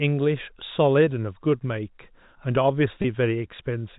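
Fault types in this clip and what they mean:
packet loss with pitch repetition: a brief held, buzzy sustain at 3.02 s, where 20 ms went missing, fitting one lost packet, bridged by repeating the last pitch period.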